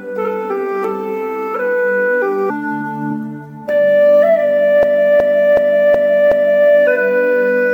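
At 4.83 s the audio locks into a system hang loop lasting until about 6.69 s. The playback side stalled while the sound hardware kept replaying its ring buffer, so one 371.5 ms slice repeats exactly five times, a stutter pulsing at 2.69 Hz. That length fits a 16384-sample buffer. Essentially no audio is lost. On a waveform, identical blocks tile side by side, and a spectrogram shows the same pattern stamped repeatedly, with sharp vertical seams at each restart.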